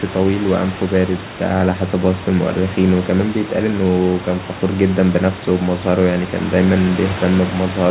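No faults can be heard anywhere in this speech.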